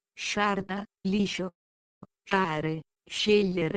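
Three timing problems turn up in this short bit of audio. From 1.48 to 2.03 s it stops for about 0.54 s. The sound trails off and most of that stretch, roughly half a second, is silent, then picks up right where it left off with nothing lost. That's a call audio freeze, most likely packets held up in transit until the jitter buffer ran dry. Then at 2.29 s there's a skip ahead: playback jumps forward almost seamlessly, but something like a third of a second of audio is simply gone, with the two sides butted together. Finally, from 2.56 to 3.73 s you get a jitter buffer slow-down. The audio plays at about 89% speed with the pitch unchanged, because tiny repeated snippets stretch it by 138 ms while the buffer rebuilds its reserve, so things sound a bit drawn out.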